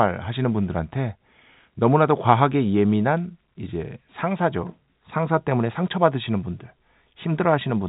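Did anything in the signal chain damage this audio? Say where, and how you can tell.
No, nothing in the signal chain damaged this audio.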